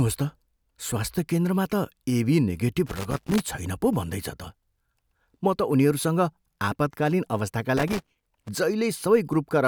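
Speech, with loose connector crackle in two bursts. The first runs from 2.86 to 3.46 s. The second runs from 7.77 to 8.48 s. Each is an irregular scratching crackle. A worn or dirty contact is making and breaking as it shifts. That chops the signal.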